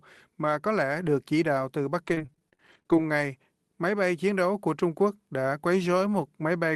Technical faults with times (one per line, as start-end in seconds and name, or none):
2.06-3.03 repeated packet loss (robotic sound)